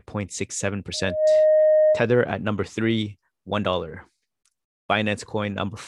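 From 0.93 to 2.11 s, loudspeaker feedback squeal: a single 617 Hz tone swells over about a third of a second to roughly 10 dB above the speech. This is a self-sustaining loop, not a steady hum or whistle.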